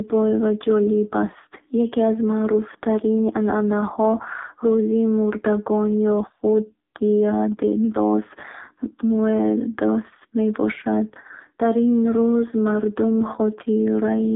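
Thin, buzzy and synthetic throughout, this speech has nothing above about 3.8 kHz and little below 250 Hz. That points to the AMR narrowband mobile codec, heavily damaged at a low bitrate that fits its 5.9 kbps mode, rebuilding the voice from a coarse vocal-tract model.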